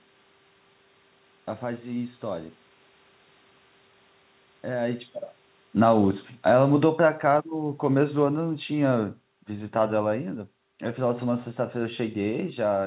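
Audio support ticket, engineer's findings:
Automatic gain falling, 5.67 to 9.11 s: level sinks about 9 dB, room noise dropping with it. Probable component: capture AGC, lowering gain after too-loud input or too-strong background noise, just after a talker shift near 5 s. Narrowband, nothing above 4 kHz, which fits G.711.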